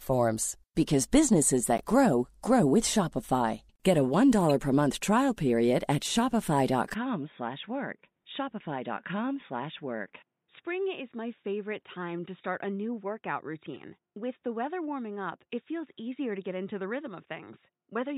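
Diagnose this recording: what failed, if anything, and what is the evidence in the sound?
Codec stage: corrupt frames decoded. Short chirp-like bursts occur at 1.78–1.81 s, just before "grow grow with", at 4.50 s, just before "per month trial", at 13.74–13.79 s, and at 17.15 s. Bit errors in compressed frames misplace spectral energy for a frame or a few, peaking at about −25 dBFS early and about −40 dBFS later.

Input device stage: from 6.94 s to the end, the sound turns dull and boxy with no gap at the change. Nothing remains above 3.8 kHz, the level drops about 10 dB, and a new noise floor sits roughly 55 dB below the signal. The likely cause is the input switching to a poorer, band-limited device.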